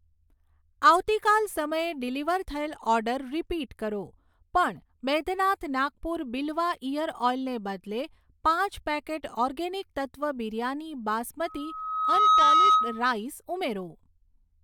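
It's a speech recording, and the trouble is a loudspeaker feedback squeal from 11.45 s to 13.17 s. A tone at 1.3 kHz creeps in and swells over a bit under a second until it sits about 10 dB above the speech. That's the mic picking up the speaker it's feeding, with the loop gain tipping over unity at that one frequency, so it keeps feeding itself until the loop gets broken.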